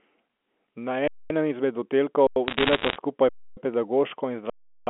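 At 1.08 to 1.30 s, 2.27 to 2.36 s, 3.29 to 3.57 s and 4.50 to 4.87 s the speech drops into a flat, held level: an underrun with held sample, where the output buffer emptied and the converter froze on its last value. The 93 ms and 372 ms gaps fit 4096- and 16384-sample buffers. Playback resumes where it stopped, so each gap ends softly. From 2.48 to 2.96 s, bit errors on the digital phone line, at roughly 1.5 percent, corrupt individual G.711 samples and lay sharp ticks and crackle over the unchanged speech.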